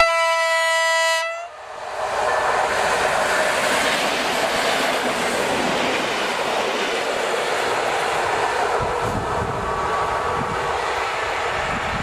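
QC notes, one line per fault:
1.76–1.84 s, 4.44–4.64 s and 6.83–7.18 s, DAB burbling: short bursts of bubbly, squelchy chirping as bit errors slip past error correction into the MP2 data and scramble individual sub-bands for a frame at a time. The bursts get longer each time, with the last the worst, which points to errors climbing toward a few tenths of a percent.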